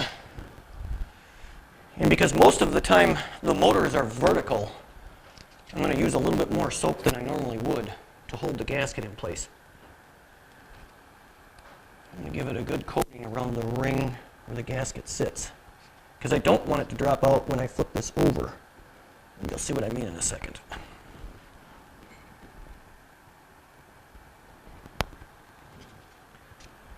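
From start to finish there's a truncated block size mismatch. Each block loses its tail on the way to the next stage, so you get a 100 Hz buzz and audio running 1.16 times fast at about normal pitch, which fits 512-sample blocks being written.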